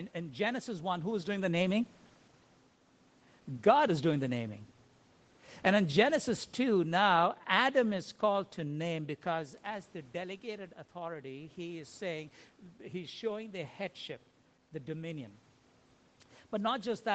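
Automatic gain falling, from 5.64 to 8.52 s: the gain control judged the input too loud or its background noise too strong and pulled its gain down by about 4 dB over nearly three seconds. The voice sags steadily rather than stepping down, and the room noise sinks with it, which shows that the level change happens in the processing and not at the source. The slide settles just before "to name because as".

Automatic gain rising, from 10.51 to 13.79 s, begins just after "name because as the". This follows the talker moving back from the microphone around 9 s, which dropped the input by about 9 dB. The gain control reacted by slowly raising its gain about 3 dB over roughly three seconds, so voice and background swell together. The correction is only partial, leaving the speech quieter than before.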